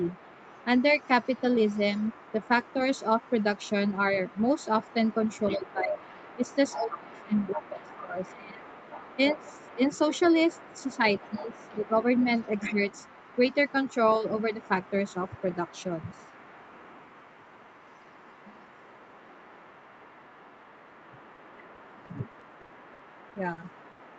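From 0.0 to 24.2 s, a faint second voice sits about 25 dB under the speech. This is the other side's voice leaking through, likely echo the canceller missed.

Speech suppressed in double talk follows. The talker dips deeply from 5.5 to 9.82 s, then more lightly from 10.98 to 11.96 s, and slightly at 12.69 to 12.80 s.

At 21.35 to 21.39 s, a short concealed packet loss patches a 20 ms hole. It leaves a brief smear.

From 21.75 to 24.01 s, repeated packet loss makes the sound choppy and robotic. About a dozen holes, the longest 80 ms, fill 17% of the stretch.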